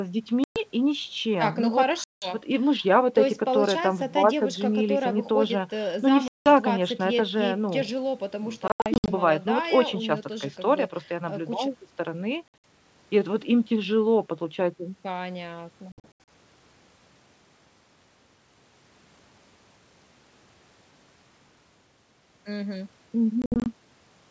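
Speech clip with seven hard-edged dropouts, each a sudden hole of silence followed by slightly distorted sound that settles within some tens of milliseconds. The dropouts fall at 0.44, 2.04, 6.28, 8.68, 12.48, 15.92 and 23.42 s, lasting from about 120 to 240 ms in total, some as scattered short gaps. This is packet loss on an ADPCM call over G.722 wideband coding: lost packets become silence and knock the decoder's adaptive predictor and step size out of step with the sender's until it recovers.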